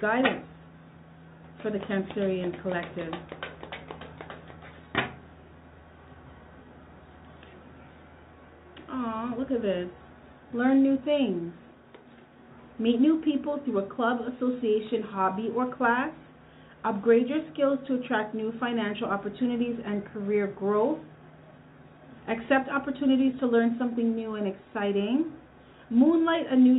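Nothing is technically wrong with it: the sound comes through a G.711 mu-law call path at 64 kbps with nothing above 4 kHz, as that codec delivers, and no faults turn up anywhere in it.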